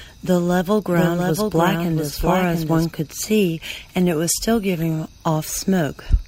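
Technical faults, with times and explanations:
0.91 to 2.85 s, doubled audio track: a second full-band copy of the speech runs roughly 0.7 s behind the original and around 5 dB quieter. It has no decay or room colour, and it starts and stops abruptly. The likely cause is the same signal being captured again through a slower path. On a spectrogram, each speech pattern reappears as a fainter duplicate shifted later in time. The waveform shows overlapping envelopes with hard edges where the copy begins and ends.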